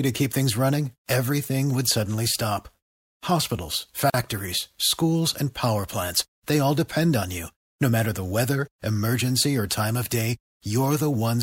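At 4.10 to 4.14 s the speech drops into a gap at a join of encoded pieces, about 42 ms of silence where separately encoded segments meet with their encoder delay and final-frame padding left in. It sounds like a brief hiccup. The waveform shows a flat stretch with slightly blurred edges, and the spectrogram a thin empty vertical band.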